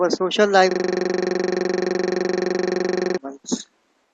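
A system hang loop runs from 0.71 to 3.18 s, right after "social life". The system stalled while the sound hardware kept replaying one 42.67 ms slice, which fits a 2048-sample buffer, so that slice repeats dozens of times as a rattling buzz at 23.4 Hz.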